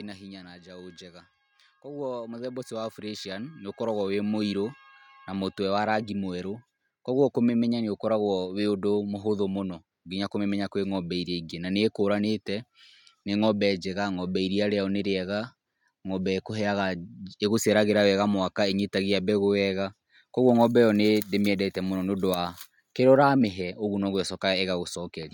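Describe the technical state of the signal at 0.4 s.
At 0.4 s you're right in the middle of the automatic gain falling, which runs from about 0.05 to 0.71 s. The gain control has decided the input is too loud, or its background noise too strong, and is easing its gain down, about 3 dB over that stretch. So the level starts out loud and then sinks steadily, and the background sinks right along with the speech, which is the giveaway that it's the gain moving rather than the talker.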